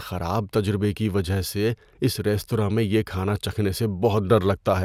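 No technical faults can be heard anywhere in the speech.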